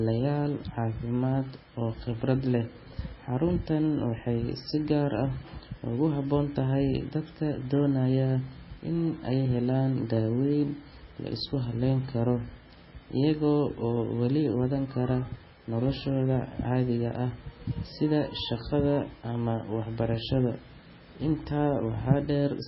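A speech recording with heavy MP3 compression from start to finish. Nothing is heard above about 5.6 kHz, so the top end sounds dull and boxed in. Weak detail flickers in and out between frames. That gives the speech a watery, swirling texture, with metallic chirps on s sounds and smeared consonant attacks. The encoder likely ran very short of bits, which fits a very low bitrate around 16 kbps.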